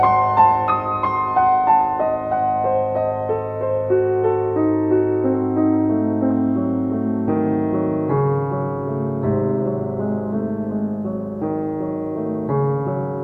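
Nothing in the audio stood out as a technical problem on listening.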